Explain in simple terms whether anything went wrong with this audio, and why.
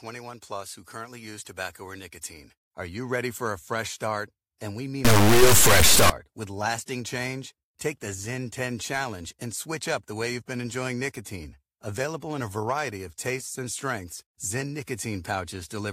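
From about 5.05 to 6.10 seconds, the speech is replaced by a harsh, extremely loud buzz, like a square wave slamming on and off, dropping to silence where the sound underneath is very quiet. This is an integer read as float fault. Whole-number audio samples, which fits 32-bit integers, were interpreted as decimal floating-point values. The resulting numbers are either nearly zero or wildly beyond full scale, so the output leaps between silence and maximum loudness.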